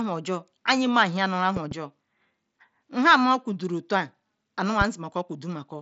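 A speech clip heard through a wideband Bluetooth headset path, with nothing above about 7.7 kHz. It has a loud pop fault. A double pop comes at 1.57 to 1.74 s, about 5 dB above the speech. A single, louder pop follows at 4.81 to 4.84 s, about 10 dB above. The speech carries on beneath both. The likely cause is a voltage spike from a connector, switch, static or driver glitch.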